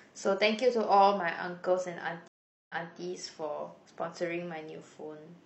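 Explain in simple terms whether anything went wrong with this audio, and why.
At 2.28 s the speech drops out for 0.42 s in a stream reconnect. Playback then restarts 0.28 s earlier, replaying a moment, and settles by 2.97 s.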